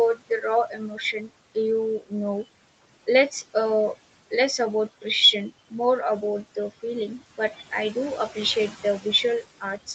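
From start to finish the background noise pumps: it drops away in the gaps between words and comes back up underneath them, so the room noise, sitting about 16 dB below the speech, never holds steady. These are noise suppressor artifacts. The suppressor judges each frequency band frame by frame, and wherever it decides a band holds only steady noise it pulls that band down, here by about 18 dB. That switching between lowered and restored bands is what makes the background rise and fall with the speech.

Three times the suppressor takes speech for noise, and the result is speech cut by the noise suppressor. From 0.15 to 0.45 s a short stretch sounds swallowed, dropping by up to about 18 dB over about half of that window. From 0.68 to 1.31 s the speech fades, by up to about 16 dB, over a few hundred milliseconds in all. From 1.99 to 2.12 s, just before "know less uh less", a brief moment goes faint, by up to about 18 dB. 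Each time the quiet speech fell under the suppressor's noise threshold and was turned down along with the background.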